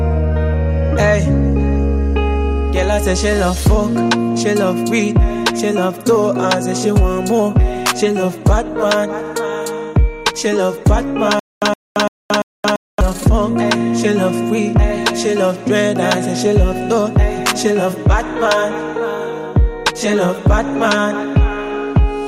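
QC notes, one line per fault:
11.39–13.01 s, stutter with silent gaps: a 117 ms burst of sound repeats 4 times, each followed by 224 ms of dead digital silence, an even 341 ms cycle. This is likely a stalled stream replaying its last fragment. The repeated burst and true silence set it apart from a plain dropout or a seamless loop, and the audio due in that span is lost.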